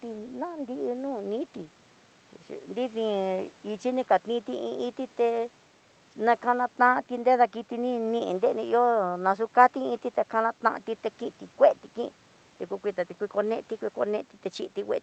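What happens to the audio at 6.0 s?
At 6.0 s the speech continues intact, with only the faint room noise about 33 dB beneath it and the call path carrying it through as usual.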